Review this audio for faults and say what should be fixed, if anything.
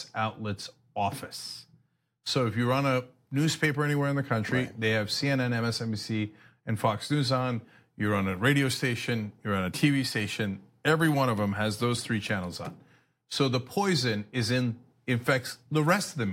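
No faults can be heard, so nothing needs fixing.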